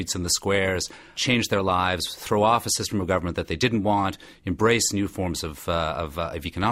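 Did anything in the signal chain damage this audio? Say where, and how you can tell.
No, the signal chain shows no damage.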